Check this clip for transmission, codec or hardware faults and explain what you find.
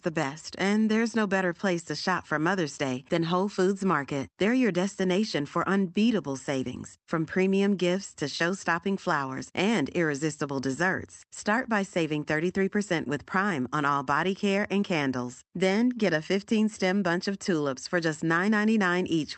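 No transmission, codec or hardware faults can be heard in this speech recording. It has passed through a WebRTC call path working as expected, and its top end stops at about 8 kHz, which fits the Opus codec running at a wideband setting.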